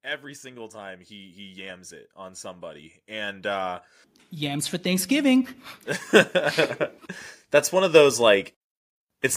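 From 0.05 to 5.57 s, automatic gain rising lifts speech and background together by about 17 dB; the waveform envelope widens steadily and the spectrogram brightens throughout.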